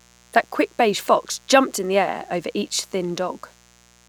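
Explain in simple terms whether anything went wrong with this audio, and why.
There's a mains buzz under the speech, running from the very start to the end. It's a steady, raspy hum-buzz based on the 60 Hz power frequency, sitting fairly low beneath the speech but never going away. It happens when something like a light dimmer, a power supply's rectifier or a poorly shielded cable lets sharp electrical spikes from the wall power leak into the audio, twice every power cycle, producing a stack of tones that climbs well into the kHz range.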